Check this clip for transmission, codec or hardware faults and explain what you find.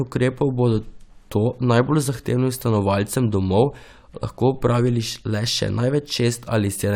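The speech signal arrives intact, continuous and steady, with nothing audible that points to a fault anywhere along its path.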